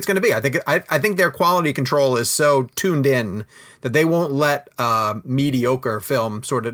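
No technical faults can be heard anywhere in the speech recording. There is nothing in it to place on a timeline.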